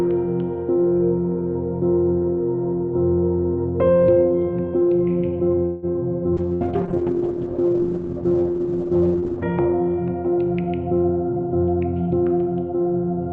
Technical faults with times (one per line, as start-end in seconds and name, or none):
4.07-13.32 time-stretched section
5.65-5.86 call audio freeze
6.40-9.55 call bitrate drop
6.55-6.64 burst of packet loss
11.29-12.37 jitter buffer speed-up